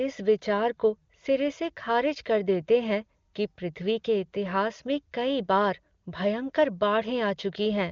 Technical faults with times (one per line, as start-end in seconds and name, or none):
none